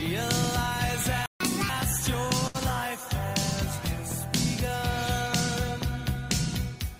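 At 1.26 s the sound cuts out completely. This is a playback stall. The silence lasts about 0.14 s, until 1.40 s. The player likely ran short of data or was blocked. Output then resumes.

From 1.40 s to 1.69 s comes catch-up at higher speed. The backlog is resampled to play at 1.5 times normal speed. Pitch jumps by around seven semitones, so the sound turns briefly chipmunk-like. Then both drop back to normal.

From 2.47 s to 2.57 s there is a short stall from a late packet. A packet arrived 72 ms late. The receiver stretched the last sound to fill that gap. Nothing is lost. One sound is simply held too long, with a slight buzz or dip.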